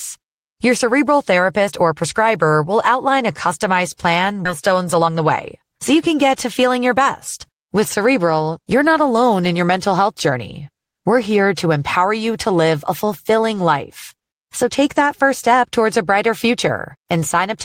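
A speech clip with a skip ahead at 4.45 s, right after "outline a customized plan": roughly 0.7 s of audio is simply gone and the two sides are butted together with no silence or fill, which separates it from a dropout that leaves an audible gap. Two jitter buffer speed-ups follow as the receiver sheds excess buffered delay. From 4.71 to 5.20 s speech runs at 125% speed, trimming about 150 ms, and from 5.62 to 7.01 s at 106%, trimming about 100 ms. Pitch stays unchanged throughout, unlike a resampling error, so it sounds hurried rather than higher.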